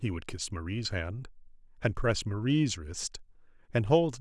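A short bit of speech with nothing technically wrong to point out anywhere in it.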